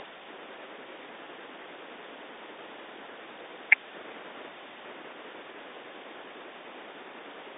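Nothing's amiss here: it's speech carried over an ordinary phone line, with the narrow band of about 300 Hz to 3.7 kHz that fits G.711 A-law coding, and no faults turn up anywhere in it.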